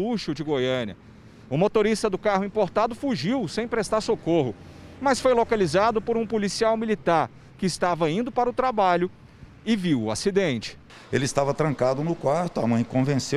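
Nothing is technically wrong with this audio.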